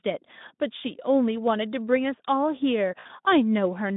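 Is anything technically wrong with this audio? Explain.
Yes. From 2.99 to 3.07 s, VoIP packet loss concealed by the speech codec: roughly 60 ms of audio never arrived, which fits three lost 20 ms frames. The Speex decoder, running at 15 kbps over a 150 Hz to 3.7 kHz line, filled the gap by repeating its last pitch and filter with falling gain. The speech stretches into a brief buzzy tone or coloured noise that fades, and it stays weak or distorted as the decoder recovers once packets return.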